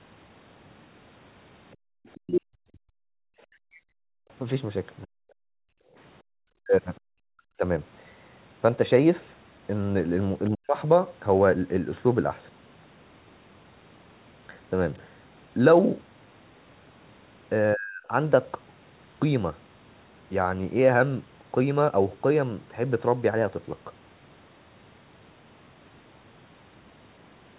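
From 1.74 to 2.2 s a faint second voice, around 30 dB below the talker, sits under the sound. It is likely the other side's voice leaking through, where loudspeaker playback escaped the echo canceller. A shorter scrap returns at 3.74 to 3.8 s, fainter still.

Inside that first leak, from 1.76 to 1.92 s, the room background drops by about 40 dB and then returns. This is background gated by the echo canceller, which clamped the microphone hard while the loudspeaker played. It happens again from 3.87 to 4.29 s and in brief dips between 6.22 and 7.07 s.

Across 2.2 to 7.62 s the talker's own level repeatedly sinks deeply, adding up to roughly two seconds of lost audio. The likely cause is speech suppressed in double talk: with both sides speaking, the canceller could not tell the talker from the echo and turned everything down. Shorter cuts of about a third of a second each follow at 10.5 to 10.77 s and 17.74 to 18.1 s.

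Throughout, the audio is band-limited to 4 kHz, which fits a G.711 A-law call path at 64 kbps.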